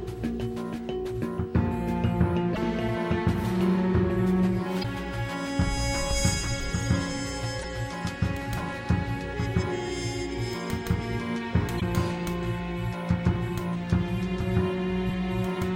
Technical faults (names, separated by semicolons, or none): damaged data in a compressed stream